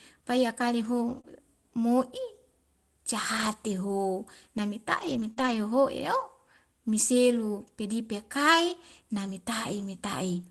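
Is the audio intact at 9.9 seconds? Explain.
Yes, the speech is intact at 9.9 s, with no fault at that moment.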